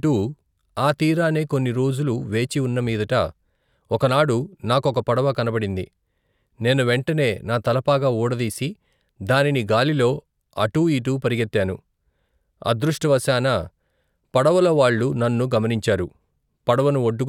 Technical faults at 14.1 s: none

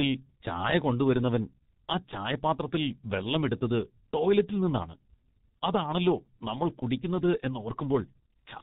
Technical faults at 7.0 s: G.723.1 codec

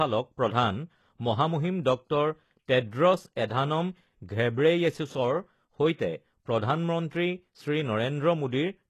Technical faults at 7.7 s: HE-AAC compression

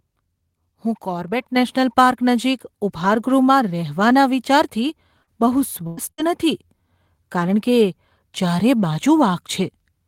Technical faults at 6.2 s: burst of packet loss; lost packet rebuilt from error correction

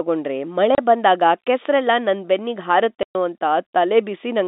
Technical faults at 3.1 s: packet loss filled with silence

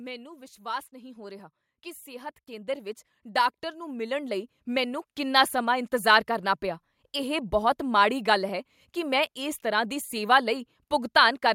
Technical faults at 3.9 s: automatic gain rising

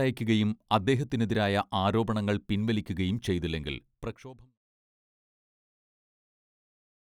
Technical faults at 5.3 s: none

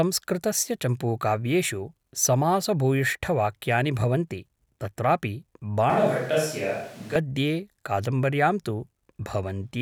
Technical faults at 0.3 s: none

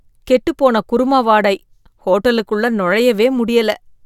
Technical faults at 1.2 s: none

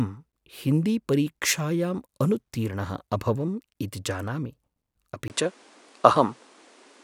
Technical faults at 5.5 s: input switched to a poorer device

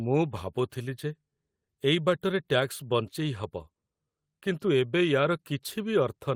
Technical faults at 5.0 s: none

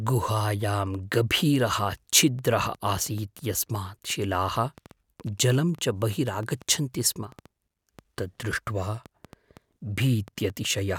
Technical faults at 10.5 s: train of clicks

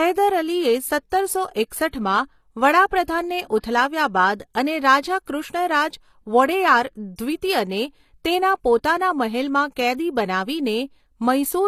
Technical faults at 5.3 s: HE-AAC compression; pre-echo

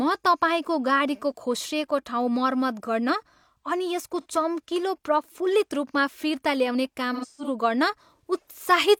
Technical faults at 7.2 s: AAC frame loss with concealment

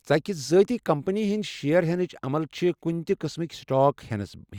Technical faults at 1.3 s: none

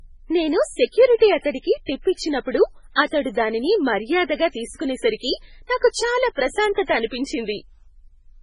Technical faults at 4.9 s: MP3 compression

